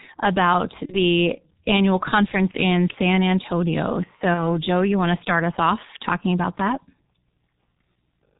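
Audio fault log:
Throughout: G.723.1 codec, heavily damaging at 6.3 kbit/s; nothing above 4 kHz, so speech comes out muffled and hoarse, consonants smeared by slow 30 ms frames.
0.86–0.98 s, 2.51–2.58 s, 4.34–4.45 s: VoIP packet loss concealed by the speech codec; one 30 ms frame lost each time, decoder stretches a fading buzz or coloured noise, voice stays weak briefly afterwards.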